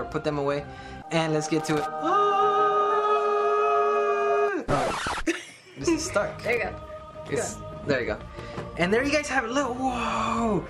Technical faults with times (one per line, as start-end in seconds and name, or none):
1.60-1.86 loose connector crackle
6.44-6.57 loose connector crackle